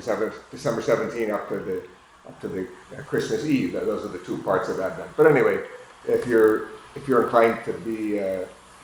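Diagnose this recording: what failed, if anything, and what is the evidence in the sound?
The resampler restarted on every block during sample-rate conversion: a 50 Hz buzz throughout, present only with signal, pointing to 20 ms blocks each converted independently, with edge errors.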